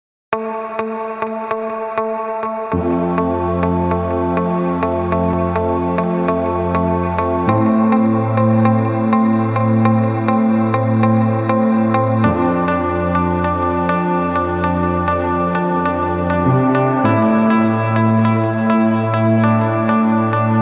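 No technical faults can be heard anywhere in the recording. Nothing in the audio stands out as needing attention.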